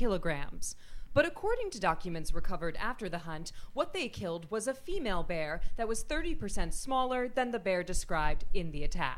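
No technical faults can be heard anywhere in this audio. The sound holds steady throughout, with nothing that calls for comment.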